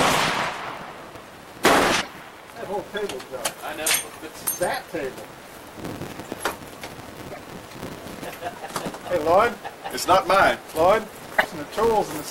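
Filter restarted on every block runs through the whole clip. The filter drops its stored state at each block boundary and starts again from silence, so every block opens with a small transient. These transients repeat 200 times per second, which fits blocks about 5 ms long. They form a steady 200 Hz buzz whose loudness rises and falls with the level of the sound underneath.

Damaged data in a compressed stream first appears from 1.97 to 2.08 s and returns from 7.28 to 7.38 s. Part of the encoded stream there is wrong, so the decoder misreads or rejects those frames, loses sync and hunts for the next valid frame header. Each disruption lasts about 0.11 s and is heard as a chirp, squawk, click or brief gap where the sound breaks off before it picks up again.

A train of clicks runs from 7.89 to 9.71 s. About seven pulses of much the same shape arrive at an uneven pace, averaging about 3.3 per second. 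Their peaks are roughly level with the surrounding sound, and they are heard as ticking or popping laid over the audio. The likely cause is an outside pulse source, such as interference from nearby equipment or a faulty connection or power supply.

The damaged data in a compressed stream occurs once more from 11.35 to 11.46 s. Over about 0.11 s the same loss of frame sync produces another short chirp, squawk, click or hole in the sound.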